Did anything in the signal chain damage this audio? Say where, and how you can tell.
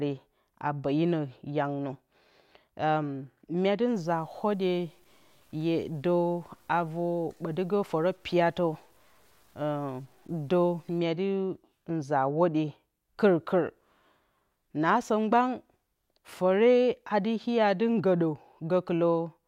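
Yes. From about 3.95 s to 10.99 s the speech goes grainy, with a rough distortion that rides along with the voice rather than sitting underneath it as steady hiss. It sits around 40 dB below the speech and gets more obvious as the level drops. That's low bit depth without dither, most likely from a sample-format conversion that truncated to something like 9 bits, so the rounding error tracks the signal instead of being spread into noise.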